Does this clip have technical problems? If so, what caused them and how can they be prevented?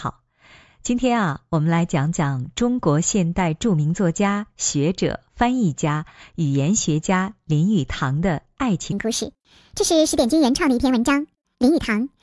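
Yes. From 8.92 s to 12.23 s the speech turns high and hurried, running 1.5 times too fast and 7 semitones sharp. That is a wrong sample rate, consistent with 16 kHz audio played unconverted at 24 kHz. Resampling to the output rate prevents it.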